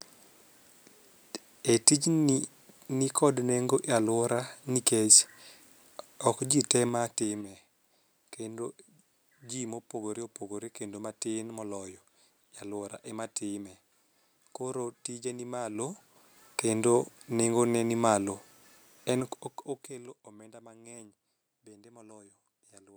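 Speech, with zipper noise from 6.80 to 7.48 s, just after "ok jii te". The level drops roughly 10 dB in 3 dB steps, about five per second, each step ticking audibly.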